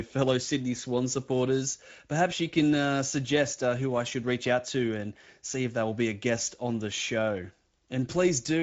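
Speex codec coding runs throughout this speech clip, from start to finish, and its damage is plainly audible as a hoarse, noisy grain over the speech. Speex is a CELP codec that models each short stretch of speech with a filter driven by a coded excitation signal. At this quality setting, which fits a bitrate of about 16.8 kbps, that excitation is coded coarsely. Nothing is present above 7.7 kHz, which matches wideband Speex's band limit.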